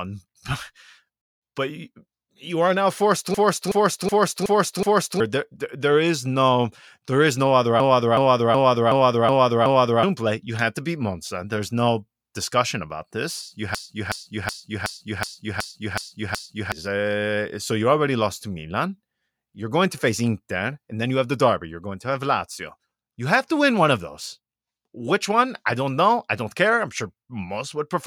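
System hang loops at 3.34–5.20 s, 7.80–10.03 s and 13.75–16.72 s in this speech clip: a frozen driver replays one 0.37 s chunk 5, 6 and 8 times, a 2.69 Hz stutter that fits a 16384-sample buffer, losing about two, two and three seconds.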